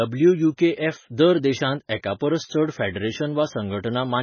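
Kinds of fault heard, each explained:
MP3 compression: the speech has nothing above 6.6 kHz and a heavy watery, swirly texture throughout, likely from an MP3 encoder starved of bits, which fits a very low bitrate of around 18 kbps, so it drops the treble and lets weak frequency detail flicker between frames.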